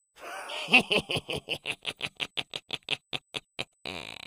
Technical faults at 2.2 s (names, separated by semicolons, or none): USB whine